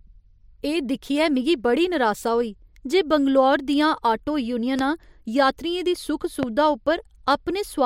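Two loud pops land on the speech here, the first at 4.79 to 4.81 s and the second at 6.43 to 6.45 s. Each is a single sharp hit lasting only a couple of hundredths of a second, with the talking carrying straight on underneath. The first peaks about 10 dB above the speech, and the second is louder at about 15 dB. The likely culprit is a brief electrical spike, such as a switch, static discharge or connector glitch, added into the signal path.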